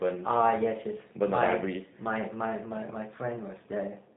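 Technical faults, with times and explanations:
Throughout, G.729 codec: the speech is rebuilt from a vocal tract filter, a pitch predictor and a few pulses per short frame, leaving it plainly rough and synthetic-sounding, with nothing above 3.8 kHz. This fits a G.729A stream at 8 kbit/s.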